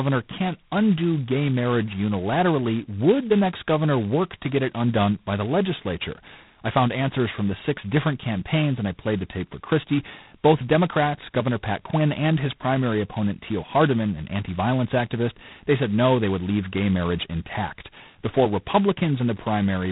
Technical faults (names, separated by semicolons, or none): G.726 ADPCM